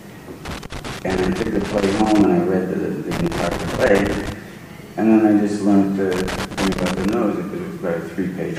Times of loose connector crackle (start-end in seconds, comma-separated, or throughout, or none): 0.45-2.25, 3.11-4.32, 6.12-7.13